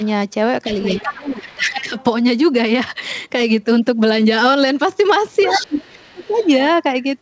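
Other side's voice leaking through appears from 0.66 to 1.32 s at roughly 15 dB below the talker, again faintly from 1.98 to 2.04 s, at about 10 dB down from 5.4 to 5.7 s, and very faintly from 5.9 to 6.48 s. A second voice sits under the speech in scraps. The likely cause is a loudspeaker feeding the far end back into the microphone, with the echo canceller leaving part of it behind.

Speech suppressed in double talk runs from 0.91 to 1.96 s and from 5.57 to 6.37 s, overlapping the leaks. The talker's level sinks by around 20 dB in the first stretch and around 30 dB in the second, across roughly a second and under a second. With both sides speaking at once, the echo canceller likely could not tell the talker from the echo and pulled everything down together.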